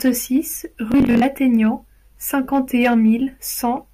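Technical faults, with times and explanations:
0.92 to 1.22 s, Bluetooth stutter: the wireless link failed to deliver audio packets in time, and the receiver filled each gap by replaying its last buffer. About 171 ms of speech went missing, scattered across roughly 300 ms. The longest unbroken dropout was about 43 ms. The repeated slices give a brief buzzing, machine-gun texture rather than silence. Speech then resumes further along, as though it had kept playing underneath, which fits about eight lost packets.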